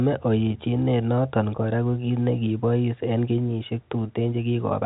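No technical faults can be heard in this speech.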